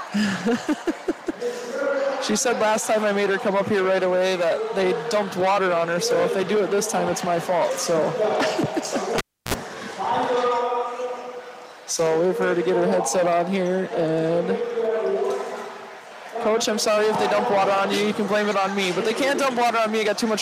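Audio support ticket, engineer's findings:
Cable pulled and plugged in, 9.18–9.54 s. Pop on disconnect, then about 0.31 s of near silence with the signal path open. Roughly 56 ms of 60 Hz mains buzz as the plug tip alone re-contacts the jack, picking up hum with no ground. Second pop as full contact restores the audio. Probable component: the input cable or jack at the source.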